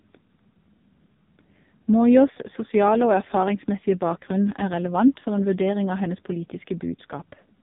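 The speech runs through a heavily compressed AMR narrowband mobile codec, likely at around 5 kbps, leaving nothing above 3.7 kHz and a buzzy, synthetic, muffled tone throughout.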